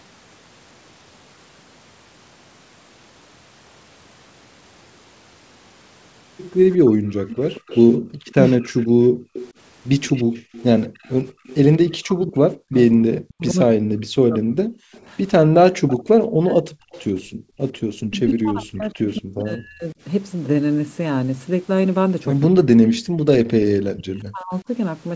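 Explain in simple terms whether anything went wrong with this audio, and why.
Three kinds of trouble show up, all from an echo canceller on a speakerphone call struggling.

An echo leak runs from 6.71 to 12.84 s and again from 14.92 to 17.02 s: a faint copy of the voice trails the original by about 0.18 s, much quieter than the main voice. This is likely sound from one side's loudspeaker getting back into its microphone and being sent back. Unlike the dips described below, this adds sound rather than removing it.

Speech suppressed in double talk hits from 6.82 to 8.76 s, 11.97 to 19.96 s and 22.45 to 24.69 s. The talker's voice drops in pieces, at worst to near silence, for under a second in the first stretch, about four seconds in total in the second, and about a second and a half in the third. The likely cause is that the canceller couldn't tell the talker from the loudspeaker echo, so it turned both down. 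The voice itself is what fades here, not the room.

Background gated by the echo canceller shows as the room sound briefly vanishing: for under a second in total between 7.99 and 11.44 s, and for about 0.4 s between 17.22 and 17.59 s. The canceller clamped the microphone while the loudspeaker played. What marks this one out is that the background, not the voice, drops out and then comes back.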